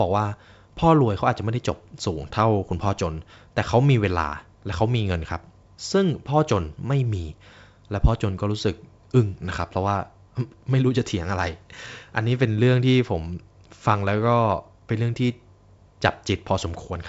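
No technical faults are audible.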